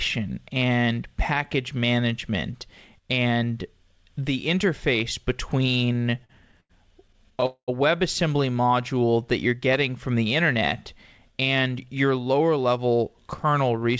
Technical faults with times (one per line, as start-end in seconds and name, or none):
5.86-6.71 repeated stalls (stutter)
7.07-7.44 repeated stalls (stutter)
7.46-7.70 call audio freeze
8.62-9.12 jitter buffer slow-down
11.30-12.79 jitter buffer speed-up